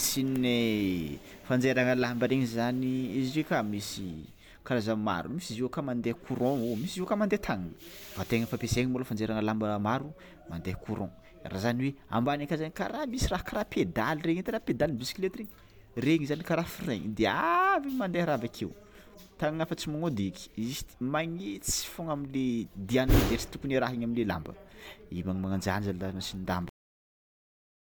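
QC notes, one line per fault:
26.69–27.89 s, cut-off end: the speech stops mid-sound at 26.69 s and drops straight to digital silence. The final buffers were never written, so nothing decays.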